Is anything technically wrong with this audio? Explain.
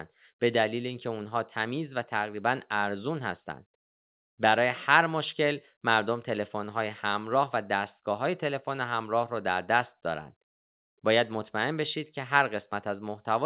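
No, nothing technically wrong can be heard here.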